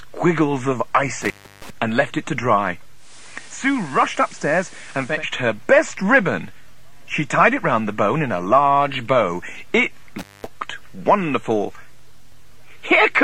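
The audio suffers from two kinds of fault. An intermittent contact cuts the sound at 1.22 to 1.7 s, with the line open for about 320 ms, and again at 10.19 to 10.47 s, open for about 210 ms. A loose plug or cable breaks the connection, so the signal drops to faint hiss with crackle at each edge. On a waveform these show as abrupt near-flat gaps bracketed by sharp spikes, and on a spectrogram as dark vertical bands with bright broadband streaks at either side. Between 2.94 and 5.25 s a digital radio blending to analogue is heard. The receiver loses the digital stream and cross-fades over roughly 218 ms to the FM broadcast of the same station, then back. During the analogue stretch the level falls by about 4 dB, and hiss rises to around 20 dB below the programme. A spectrogram shows a grey noise floor filling in, and the waveform's envelope shrinks slightly for that span.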